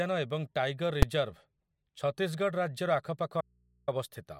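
At 1.02 s there's a single hard bang, the invalid numbers at full scale fault. Some calculation in the chain blew up into infinite or invalid values, and those got pinned to the largest positive or negative value. The whole processing block sat flat at one extreme value, far beyond the speech peaks, but it's so short, around 5 ms, which fits a 256-sample block, that the pop at its start and the one at its end merge into one sharp crack over the speech.

Then from 3.41 s to 3.88 s the speech just drops out, roughly half a second gone, and what's left is a low mains hum sitting something like 40 dB under the normal level. That's an audio dropout to a faint residue. The cut is abrupt on both sides, nothing like a natural pause or fade. The likely story is that the source signal went missing while everything downstream stayed live, so the open input's hum is all that comes through.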